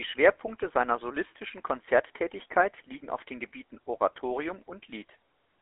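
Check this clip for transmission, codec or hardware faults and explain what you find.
The speech has a GSM full-rate codec fault running through the whole clip. It sounds buzzy and gravelly, and it is muffled because nothing survives above about 3.8 kHz. The roughness fits a 13 kbps GSM full-rate link. That codec models the vocal tract and drives it with a thinned, regularly spaced pulse excitation, so the natural texture of the voice is replaced by a coarse pulse train. The narrow 300 Hz to 3.5 kHz telephone band also removes the low warmth and the upper clarity.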